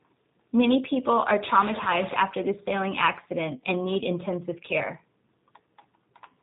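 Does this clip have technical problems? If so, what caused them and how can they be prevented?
Yes. Throughout, the speech sounds slightly rough and synthetic, with nothing above 4 kHz. This is G.729 codec damage. At 8 kbit/s the codec rebuilds each 10 ms frame from a vocal tract filter, a pitch predictor and a few pulses, so the natural detail is lost. Using a wideband codec such as G.722 or Opus at a higher bitrate would prevent it.

From 1.85 to 1.88 s the speech briefly smears into a weak, fading stretch before recovering. This is VoIP packet loss concealed by the speech codec. About 10 ms of audio went missing, which points to a single lost frame. The decoder filled the gap by extrapolating its last pitch and filter at reduced gain, and because each frame builds on the one before, the error carried into the next few tens of milliseconds. A stable network with QoS priority for voice, a suitable jitter buffer and forward error correction would prevent it.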